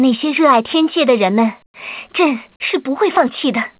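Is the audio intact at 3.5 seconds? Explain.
Yes, the audio is intact at 3.5 seconds, with nothing there beyond the narrowband sound of the WebRTC call path, which cuts off everything above 4 kHz.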